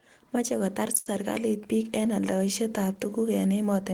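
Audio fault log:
0.97–1.08 s, short stall from a late packet: a packet arrived late and the jitter buffer emptied, so the receiver held the last sound for 86 ms, nothing lost, before "serikalit piik eng aldaishet".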